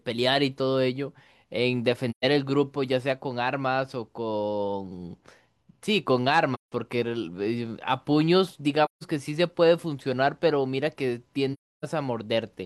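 AAC frame loss with muting occurs at 2.10–2.25, 6.54–6.72, 8.85–9.03 and 11.53–11.85 s. Missing frames decode as silence, leaving gaps of 128, 171, 171 and 299 ms that fade out and back in, consistent with lost 43 ms frames.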